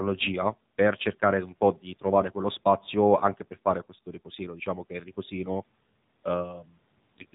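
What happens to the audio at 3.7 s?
AMR narrowband mobile codec damage is present at 3.7 s, as it is from start to finish. The speech has been squeezed through a vocal-tract model fed by sparse pulses, cutting everything above 3.8 kHz and leaving a buzzy, synthetic quality, which fits a low mode near 7.4 kbps.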